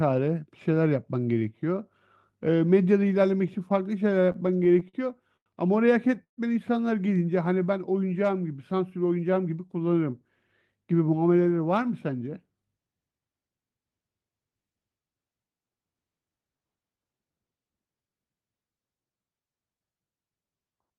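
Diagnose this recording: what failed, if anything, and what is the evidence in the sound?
Repeated stalls (stutter), 4.25 to 5.48 s, at the network and jitter-buffer stage. The speech halts ten times in just over a second. Each halt is bridged by a continuation of the last sound, the longest lasting 93 ms. About 225 ms is filled in, roughly 18% of that stretch, and none of the speech is lost. Packets were arriving late or too slowly, so the buffer kept draining and the receiver stretched the sound until data returned.

Call audio freeze, 6.24 to 6.39 s, also at the network and jitter-buffer stage. The sound stops and is held for 135 ms. The last sound carries on briefly and then fades, leaving about 110 ms of silence before the speech resumes exactly where it stopped. Nothing is skipped, but a gap has been inserted and the delay grows by 135 ms. The likely cause is packets held up in transit, which emptied the buffer completely.

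Jitter buffer speed-up, 8.71 to 9.57 s, at the receiver's buffer management. The speech runs at about 110% of normal rate with the pitch unchanged, so it sounds hurried. About a tenth of a second of audio is removed across this span. The buffer held more audio than its target. To reduce the delay, the receiver cut out short pitch-period-sized slices many times in a row.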